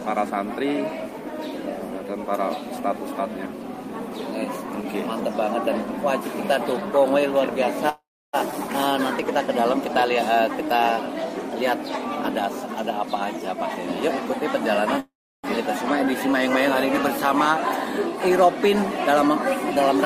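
A call audio freeze runs from 7.89 to 8.35 s. The last sound is carried on as a fading buzz for a moment, then goes silent for about 0.31 s of the 0.44 s hold. Nothing is lost; the audio resumes where it left off, now running later. The likely cause is packets held up in transit, leaving the jitter buffer empty so the receiver had to improvise until they arrived.

A skip ahead follows at 8.51 to 8.54 s. Playback jumps forward across a join of only about 9 ms, and roughly 0.3 s of audio is gone. With material already queued behind the late packets, that stretch was discarded, pulling the delay back by roughly the same amount. The two sides meet almost directly, so the cut sounds abrupt rather than gappy.

A jitter buffer slow-down spans 10.31 to 11.51 s. The sound plays at 96% speed with its pitch unchanged, giving slightly drawn-out, stretched sounds. The receiver was rebuilding its reserve by repeating single pitch periods and bits of pauses many times over, adding 59 ms in total across the stretch.

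Jitter buffer speed-up appears twice. From 12.60 to 14.41 s the audio runs at 104% speed, about a tenth of a second trimmed out. From 17.49 to 19.28 s it runs at 102%, about 50 ms removed. Both times the buffer held more than its target, so short slices of one or a few pitch periods were cut repeatedly, speeding the sound up without raising its pitch.

A second call audio freeze sits between these, from 15.00 to 15.46 s. It behaves like the first: a brief fading continuation, then about 0.33 s of silence within a 0.44 s fill, and the audio picks up with nothing missing.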